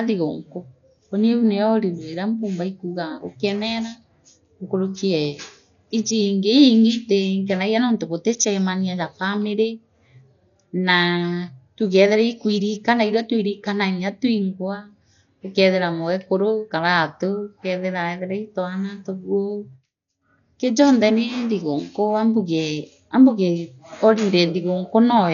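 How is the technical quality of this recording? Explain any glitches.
The technical quality is poor, with heavy codec damage across the whole recording. Throughout, the speech sounds dull, with nothing above 6.9 kHz and a rough, fluttering noise around tonal parts. The likely cause is Dolby Digital compression at a very low bitrate, consistent with about 48 kbps: the encoder narrows the band, and lines left without mantissa bits are filled with dither noise on decoding.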